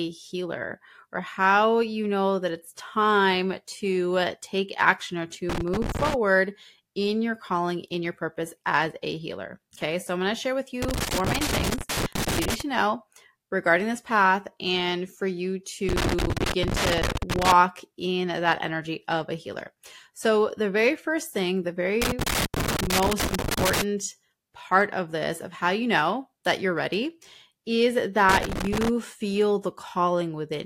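Loose connector crackle hits the speech five times: 5.49–6.14 s after "take action or to", 10.82–12.61 s, 15.89–17.52 s between "path and for you" and "in that energy of", 22.02–23.82 s, and 28.29–28.89 s after "that you're ready is". Each is a ragged burst of scratchy crackle as a bad contact chops the signal.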